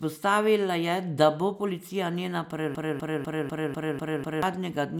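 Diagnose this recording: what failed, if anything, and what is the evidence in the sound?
A broken-record loop runs from 2.75 s to 4.43 s. One 248 ms slice of speech repeats seven times back to back, identical each pass. That's likely a stalled playback buffer resending its last fragment, so whatever should have played there is gone.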